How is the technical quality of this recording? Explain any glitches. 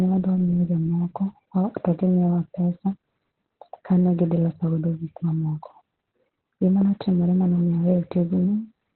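The quality is poor, with Opus voice compression damaging the speech from start to finish. The codec has dropped to its narrowband linear-prediction mode, which points to a very low rate near 8 kbps, so nothing survives above 4.1 kHz and the excitation is coarsely coded. The speech sounds muffled, hoarse and faintly robotic.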